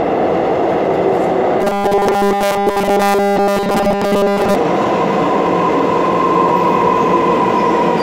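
From 1.61 to 4.55 s, robotic sound from repeated short buffers. A rigid, metallic 200 Hz buzz replaces the whole stretch, likely from one 5 ms buffer repeating.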